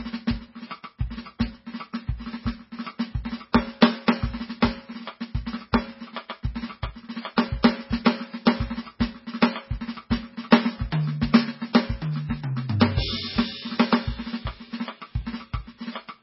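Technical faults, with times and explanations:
Throughout, MP3 compression: nothing remains above 5.6 kHz, and the sound is watery and swirly. The likely cause is MP3 at a very low bitrate, near 16 kbps.
8.45 s, pre-echo: a 12 ms hiss comes just before a sharp attack. The codec spread its block's noise into that gap, which softens the hit.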